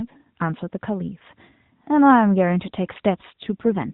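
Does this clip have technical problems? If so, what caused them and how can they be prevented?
Yes. An AMR rate drop starts at 3.42 s and runs to the end of the clip. The speech turns rougher and more synthetic there. The narrowband mobile codec keeps the same band, topping out at 4 kHz, and nothing cuts out. What changes is the bit budget. The network has likely told the encoder to cut its rate to protect a weak radio link. The sound fits a fall from 12.2 kbps to the 4.75 kbps mode. Fewer bits describe each frame, so the voice buzzes. Prevention means keeping the call on a stronger signal.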